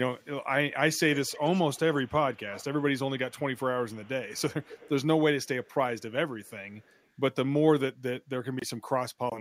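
Echo leak at 0.95–2.65, 3.31–4.9, 5.44–6.02 and 6.45–7.06 s: a faint repeat of the speech trails it by a fixed 182 ms. The repeat is about 20 dB below the speech at first and sinks to roughly 40 dB below by the last stretch. The likely cause is a far-end echo canceller letting loudspeaker pickup through. Unlike room reverberation, it is a distinct delayed copy rather than a smooth decaying tail.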